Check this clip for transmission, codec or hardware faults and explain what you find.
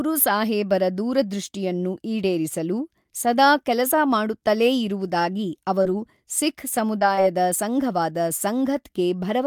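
Two kinds of network delivery fault turn up in the second half of this speech clip: a short burst of stalls and three brief losses that the receiver covered up.

Repeated stalls (stutter), 5.07 to 5.41 s, just after "ಈಡೇರಿಸಲು ಸದಾ ಕೆಲಸ ಮಾಡುತ್ತಲೇ": packets reached the receiver more slowly than they were being played, and its jitter buffer ran dry four times. Each time the receiver stretched the last sound until fresh audio came in. That filled about 33 ms, with the longest gap 12 ms, roughly a tenth of the span. No audio is lost, but the speech catches and drags here in a stutter.

Short concealed packet loss at 5.83 to 5.87 s, 6.99 to 7.03 s and 7.15 to 7.19 s: each time about 20 ms of audio never arrived in time to be decoded. The receiver patched each hole with roughly 21 ms synthesised from the preceding sound and blended it back into the real signal. Each one is a brief smear or wobble, and any short consonant falling inside a hole can drop out. 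The last two come close together.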